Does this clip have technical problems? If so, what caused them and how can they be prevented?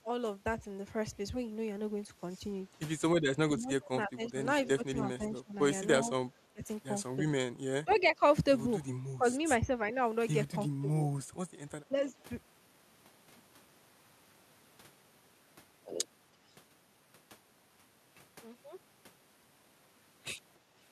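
Yes. Speech suppressed in double talk: when both sides talked at once, the echo canceller likely could not tell this talker apart from loudspeaker echo and turned the talker's voice down along with it. The speech dips or thins in patches during 3.52–6.63 s (deepest about 20 dB, roughly one and a half seconds affected in total), 7.27–8.23 s (about 15 dB), 9.18–9.9 s (about 10 dB), 10.66–10.9 s (about 15 dB) and 11.89–12.14 s (about 5 dB). Better double-talk detection, or headsets on the loudspeaker side, would prevent it.

Echo leak: one side is likely playing the call on a loudspeaker, and its echo canceller let part of what its microphone picked up pass back. Short, faint delayed copies of the voice come through at 4.65–4.69 s and 7.94–8.0 s, each 315 ms late, and at 12.08–12.23 s, 330 ms late. They sit about 20 to 25 dB below the speech. Headphones on the loudspeaker side, or a well-tuned echo canceller, would stop the leak.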